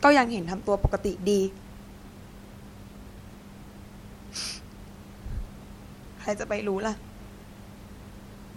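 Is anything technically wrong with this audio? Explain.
No, nothing technically wrong here: the only thing under the speech is the room's own background noise, sitting about 19 dB down, which belongs to the recording rather than the system.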